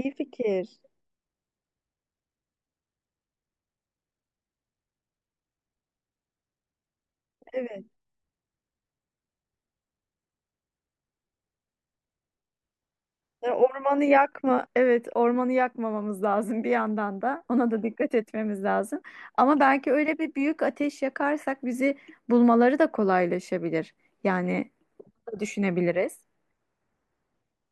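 No technical faults are audible anywhere in the recording.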